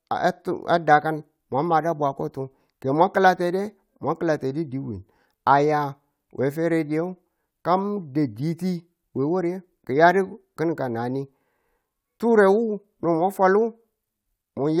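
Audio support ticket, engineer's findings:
No faults found in the audio; nothing to report for this ticket.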